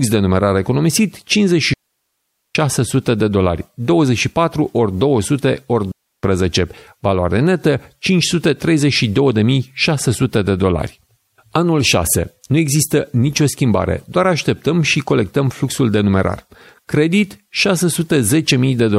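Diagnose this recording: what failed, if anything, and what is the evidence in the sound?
A digital wireless dropout occurs twice in the speech: from 1.73 to 2.55 s, a gap of about 0.82 s, and from 5.92 to 6.23 s, about 0.32 s. The failure is in the radio link between transmitter and receiver. Each gap is a clean hole of near silence, entered and left with a very brief fade and no burst of noise on either side. That points to the receiver losing too much data and muting itself until the stream recovers.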